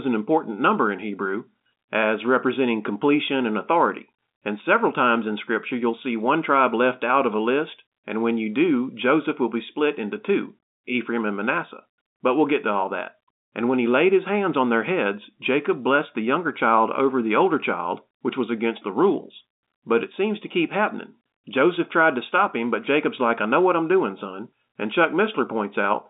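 Speech over an ordinary telephone line, carried in G.711 mu-law coding with its band running from about 250 Hz to 3.7 kHz and nothing present above about 3.8 kHz, shows no technical faults.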